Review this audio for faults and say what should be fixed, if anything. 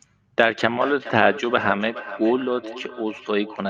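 From 0.79 s to the end at 3.69 s there's feedback echo between two devices: the speech comes back roughly every 0.4 s, about 13 dB below it. A second device in the room is replaying the call into this microphone, and the echo canceller can't remove sound another device plays. To prevent it, mute the speaker on one device or give each participant a headset.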